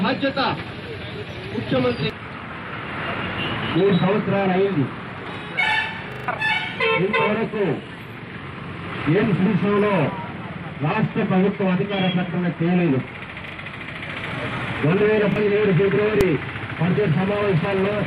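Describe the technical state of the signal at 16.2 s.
At 16.21 s the signal is hit by invalid numbers at full scale. A calculation in the processing chain returned infinite or invalid values, and these were clamped to the maximum positive or negative sample value, pinning the output flat at one extreme value far beyond the audio's peaks. The affected span lasts about 1.45 ms, which fits a 64-sample processing block. Because the block is so short, the start and end edges merge and the fault is heard as a single sharp, very loud bang.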